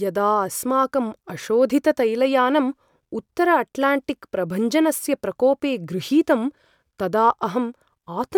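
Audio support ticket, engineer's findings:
No audible faults found in this speech recording.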